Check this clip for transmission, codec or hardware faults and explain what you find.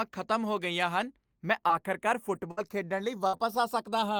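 Four transmission faults turn up in this speech recording: a slow inter-channel drift running the whole way through, plus packet-loss damage near 1.7 s and again from about 2.35 s to 3.57 s.

Channels drifting apart, throughout: The two channels run on clocks that disagree by roughly 70 parts per million, so their offset creeps to only about 0.3 ms by the end. Summed to mono, this gives slow flanging. A spectrogram shows comb notches gliding gradually across frequency.

Short concealed packet loss, 1.67 to 1.71 s, right after "ਹੋ ਗਈਆਂ ਹਨ ਮੈਂ": About 20 ms of audio never arrived. The decoder bridged the hole by extending the preceding sound for 17 ms before blending back. It is heard as a brief smear or wobble. The waveform shows a too-smooth, repetitive patch.

Lost packet rebuilt from error correction, 1.69 to 1.71 s, same landmark: The last 20 ms of that hole was rebuilt from a low-bitrate redundant copy carried in the following packet. 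The audio stays continuous but sounds rougher. The spectrogram shows noisier texture.

Repeated packet loss (robotic sound), 2.35 to 3.57 s, after "ਗਈਆਂ ਹਨ ਮੈਂ ਆਖਰਕਾਰ": Four separate holes totalling 140 ms, the longest 59 ms, were patched by extrapolation, and some of the loss was rebuilt from redundancy. The result is choppy speech with pieces missing. A spectrogram shows smeared, repeated harmonic blocks.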